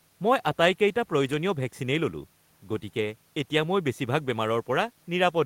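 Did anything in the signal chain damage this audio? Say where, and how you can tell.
No, nothing in the chain from capture through to playback has audibly damaged this speech recording.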